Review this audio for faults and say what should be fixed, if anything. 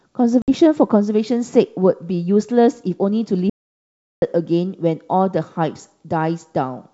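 Packet loss on an ADPCM call occurs from 0.42 to 0.50 s. About 60 ms of audio, a few packets' worth, is missing and filled with silence, so the hole has hard edges. Because the lost packets carried state the decoder needed, its adaptive predictor and step size no longer match the sender's. When speech resumes it comes back slightly distorted, then settles within some tens of milliseconds as the decoder re-converges. To prevent this, carry the call over a jitter buffer with packet loss concealment and forward error correction or redundancy, and reset or resynchronise the ADPCM state after a gap.

An audio dropout to silence runs from 3.50 to 4.22 s, about 0.72 s long. The sound cuts out mid-flow and the gap is silent, with no room tone underneath, before the audio resumes abruptly. Whatever occurred during that stretch is gone. The likely cause is a momentary loss of the input, such as a disconnected device, a failed link or an accidental mute, while the recorder kept writing silence. 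To prevent it, secure cabling and links and set up input-level or silence alarms during recording.

The G.722 wideband coding carrying the call is working normally and needs no change.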